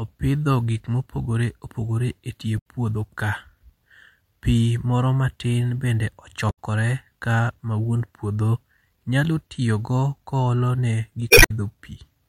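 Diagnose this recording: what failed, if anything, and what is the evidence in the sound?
The failure is at the codec stage: damaged data in a compressed stream. Brief disruptions break the speech at 2.57–2.66 s, after "opogore e tie" and before "puodho ka"; at 6.49–6.59 s, after "moro matin bende"; and at 11.27–11.51 s, after "tiyo go koolo ne". Corrupt bytes make the decoder misread frames, lose sync and hunt for the next valid header. A clean dropout would be silence or a smooth concealment fill. Here the decoder instead loses its footing in damaged data.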